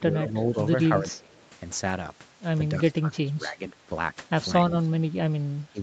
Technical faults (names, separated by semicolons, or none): speech suppressed in double talk; echo leak